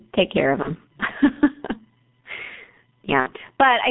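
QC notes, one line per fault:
Throughout, gain pumping: loud and soft parts are squashed closer in level, the gain swinging roughly 15 dB; likely an over-gained microphone feeding a fast limiter.
Throughout, G.723.1 codec: speech is muffled and hoarse with smeared consonants, confined to about 150 Hz to 3.7 kHz by this slow-updating 6.3 kbit/s telephony coder.
0.62–0.71 s and 3.20–3.33 s, VoIP packet loss concealed by the speech codec: after "take care of", then later, speech is stretched into a fading buzzy tone or coloured noise as the decoder extrapolates over 30 ms and 60 ms gaps.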